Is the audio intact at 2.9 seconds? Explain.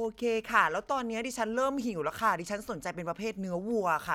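Yes, the audio is intact at 2.9 seconds, with no fault audible at that moment.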